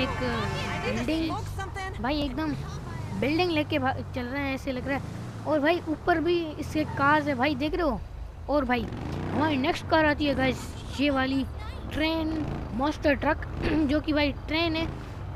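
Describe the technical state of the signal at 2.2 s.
At 2.22 s there's a repeated buffer. New audio didn't arrive in time, so the device replayed the last block, about 1.45 ms of it, which fits a 64-sample buffer, twice more, making three back-to-back copies with a hard join at each seam. Because the block is so tiny, it doesn't register as a stutter. It comes across as a quick click or a brief buzzy tick, and nothing is dropped from the sound itself.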